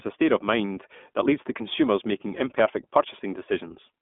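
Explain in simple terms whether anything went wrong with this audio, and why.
The whole recording went through the iLBC codec, a telephone-style speech compressor that rebuilds the sound in separate 20 ms chunks. Everything above about 3.7 kHz is lost throughout, so the speech sounds narrow and muffled, with a plainly audible rough, slightly artificial edge.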